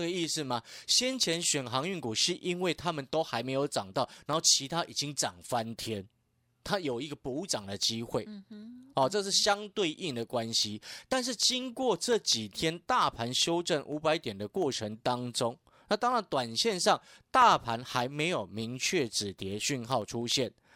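From 0.14 s to 20.61 s, periodic USB or driver dropouts skip a tiny slice of audio every 0.1 s, heard as regular ticks during speech and shown as evenly spaced vertical spectrogram lines.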